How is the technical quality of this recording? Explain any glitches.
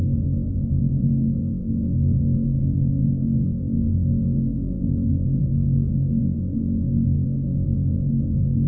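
No glitches to report here: the everyday sounds come through a call link with nothing wrong, and the missing top end above about 8 kHz is just the usual ceiling of a wideband codec like G.722.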